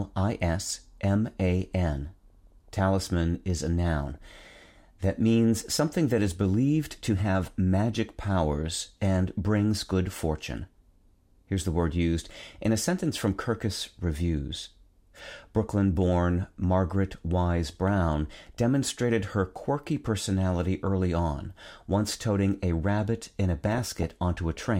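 Short bursts of noise break through this speech clip five times, from 2.28 to 2.79 s, 3.97 to 4.66 s, 5.90 to 5.98 s between "that means" and "that is believed to", 18.38 to 18.57 s just before "demonstrated her quirky personality", and 23.66 to 24.14 s after "a rabbit in a". This is DAB burbling: weak reception let a fraction of a percent of bit errors slip past error correction, corrupting MP2 samples and scale factors so individual sub-bands blip with noise or jump in level for up to a frame.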